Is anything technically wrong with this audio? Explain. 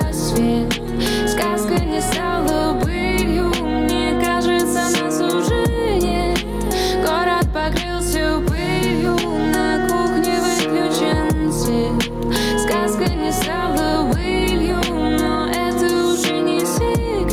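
Yes, there is gain pumping throughout the clip. The gain is pulled down on loud sounds, with the level swinging by about 10 dB. Loud and soft passages sit unnaturally close in level and the whole sound feels squashed. This is likely an input gain set far too high, with a fast limiter or compressor clamping down on every peak and releasing between them.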